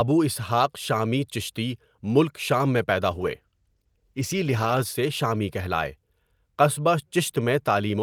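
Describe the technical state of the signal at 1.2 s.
At 1.2 s the signal is intact, with no audible fault at that point.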